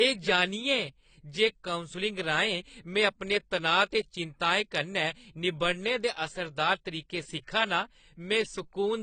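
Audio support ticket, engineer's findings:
Likely AAC compression, AAC-LC at a low bitrate (the sound fits roughly 24 kbps). Throughout. Encoder short on bits per frame, so it drops the top band and coarsely quantises the rest. Nothing above 9.1 kHz, dull speech, audible smearing and fizz on sibilants.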